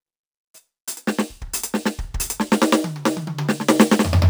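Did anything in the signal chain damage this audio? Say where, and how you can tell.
Yes, at a sample-rate conversion stage. A crude rate conversion was applied to the whole clip: the music appears to have gone from 32 kHz to 48 kHz by simply repeating the nearest sample instead of filtering. That creates a 3:2 pattern of duplicated samples and an error about 20 dB below the music. It sounds like a gritty, inharmonic fizz riding on the louder and brighter passages throughout, with tones that don't belong to the music.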